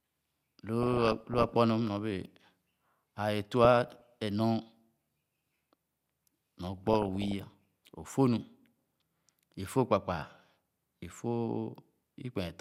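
Three bursts of burbling break over this speech at 0.83 to 1.54 s, 3.65 to 4.01 s and 6.78 to 7.62 s. This is DAB burbling: with weak reception, bit errors of up to around one percent got past error correction, putting short blips of noise into individual sub-bands.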